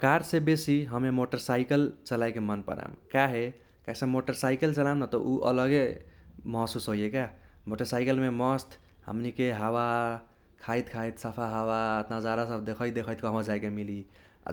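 No technical faults are audible anywhere in the speech recording.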